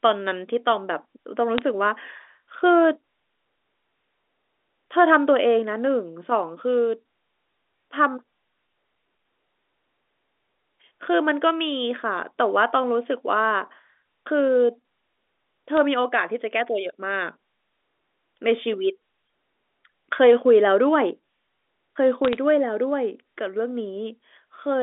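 Three bursts of bit errors on a digital phone line show up here: around 1.58 to 1.62 s, a very short one at 15.77 s, and a longer patch from 22.25 to 22.37 s. Flipped bits corrupt individual A-law samples, and when a sign or high-order bit goes, that sample jumps, giving sharp clicks and a brief crackle over the speech. The error rate sounds like a few tenths of a percent, and the speech itself stays band-limited to the usual 300 Hz to 3.6 kHz of the G.711 line.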